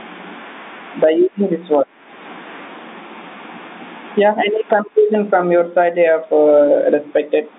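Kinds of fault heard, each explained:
Gain pumping: loud stretches of speech get clamped down by something like 20 dB, so loud and soft parts end up closer in level and the sound is squashed. That's likely a mic gain set far too hot, with a fast limiter reining it in.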